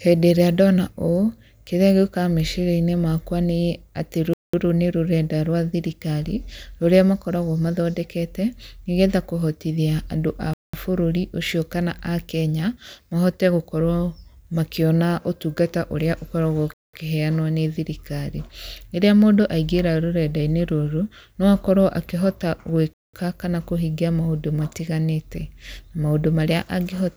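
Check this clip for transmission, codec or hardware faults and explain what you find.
The speech is broken by four gaps between chunks, at 4.34–4.54 s, 10.53–10.74 s, 16.74–16.93 s and 22.93–23.13 s. The audio arrives in 6-second chunks with 200 ms of silence inserted at each join, so the speech stops dead in short, hard-edged holes about every 6.2 seconds, though nothing is missing.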